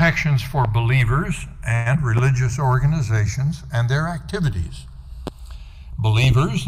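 Throughout, the channels drift apart. The two sides run on clocks that differ by roughly 40 ppm. Their offset grows to about 0.3 ms by the end. Summed to mono, comb notches sweep slowly through the spectrum, heard as slow flanging.

At 0.65 s comes a loud pop, about 10 dB above the sound. It is likely a voltage step, from a plug, switch, static or driver glitch. The sound carries on underneath. Further single pops follow at 2.18 s and 5.27 s. A double pop lands at 6.24 s.

From 1.75 to 1.88 s there is a call audio freeze. Packets were likely held up and the jitter buffer ran dry. About 103 ms is filled by continuing the last sound as a fading buzz or hiss. Nothing is lost, but everything after shifts about 0.1 s later.

At 1.94 s short concealed packet loss follows. About 40 ms of audio never arrived. Only 8 ms is filled, from the last pitch or as shaped noise. Playback then jumps ahead roughly 30 ms. 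It sounds like a brief smear.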